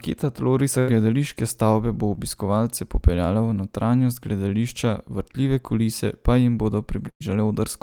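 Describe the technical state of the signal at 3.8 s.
At 3.8 s the speech signal is intact, with no fault audible at that moment.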